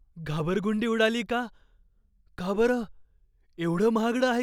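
At 0.40 s the speech jumps forward, likely a dropped buffer (overrun): a few milliseconds were overwritten before being read, so the two edges join directly. The waveform shows a sudden step, and the spectrogram a thin vertical broadband line.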